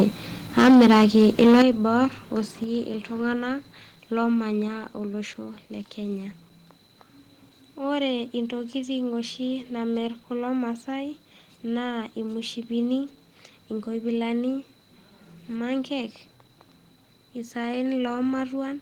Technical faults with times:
0.57-1.62 microphone overload
0.62 microphone volume stepped down
1.62 microphone volume stepped down
2.64 microphone volume stepped down
4.68 microphone volume stepped down

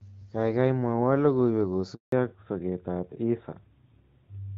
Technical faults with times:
1.94-2.12 handover gap
2.12-4.57 fallback to narrowband

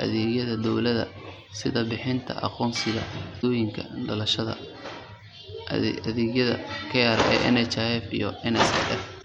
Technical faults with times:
3.38-3.44 damaged data in a compressed stream
9.18-9.24 damaged data in a compressed stream

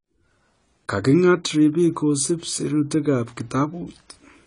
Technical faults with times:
0.00-4.46 AAC compression

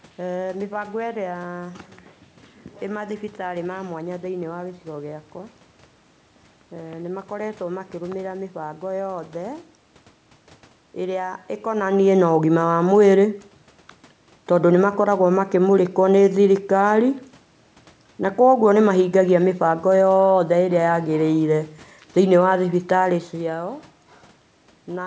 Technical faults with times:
none

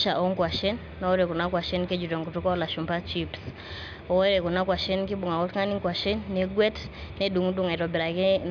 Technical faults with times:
none

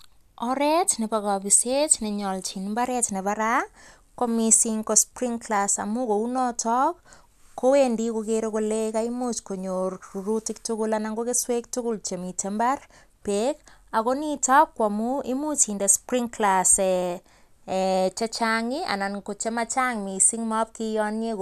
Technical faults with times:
none

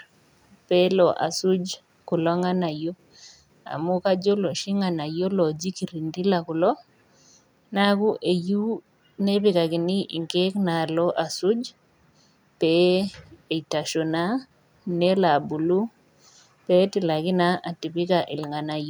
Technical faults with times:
none

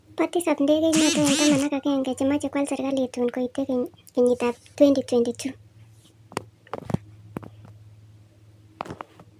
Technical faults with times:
0.00-9.39 wrong sample rate

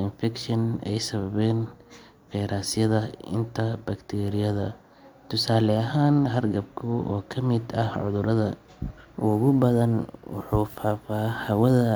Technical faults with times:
9.32-11.96 sample clock jitter

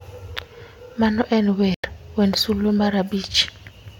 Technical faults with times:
1.74-1.84 corrupt frame muted

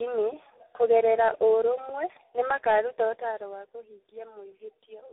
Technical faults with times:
0.00-5.13 tandem speech coding

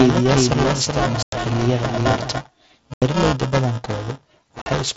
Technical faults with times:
0.00-4.96 buffer tearing
0.00-2.32 doubled audio track
1.23-1.33 unconcealed Bluetooth headset packet loss
2.94-3.02 unconcealed Bluetooth headset packet loss
4.62-4.66 unconcealed Bluetooth headset packet loss

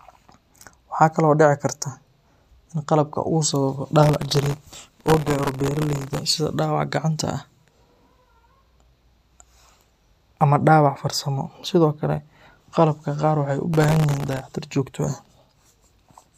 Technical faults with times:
4.03-6.21 processor overload crackle
13.74-14.42 processor overload crackle

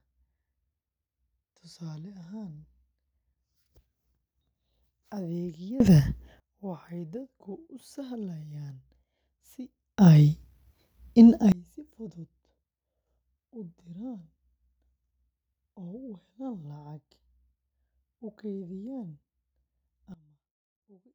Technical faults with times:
5.80-6.40 sudden gain jump
9.98-11.52 sudden gain jump
20.14-21.15 sudden gain jump

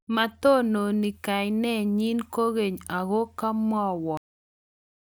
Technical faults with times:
4.17-5.02 cut-off end

